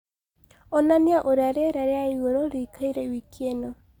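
No technical faults are audible.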